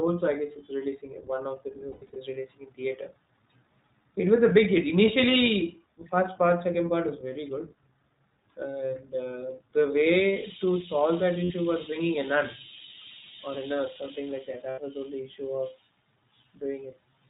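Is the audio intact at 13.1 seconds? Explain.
No, at 13.1 s the speech sounds band-limited, rough and slightly synthetic throughout; this is the iLBC codec, coding each 20 ms frame independently and dropping everything above 4 kHz.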